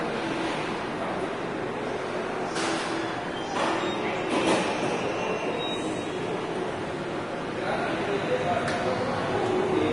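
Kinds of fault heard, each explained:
Vorbis compression: The sound stops dead above 10.6 kHz. The remaining treble is grainy and hissy, its fine detail replaced by noise of similar energy. The damage is plainly audible. The likely cause is a low-bitrate Vorbis encode, fitting about 31 kbps.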